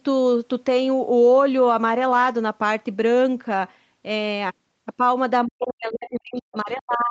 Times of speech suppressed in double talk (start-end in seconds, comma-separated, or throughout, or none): 5.45-7.11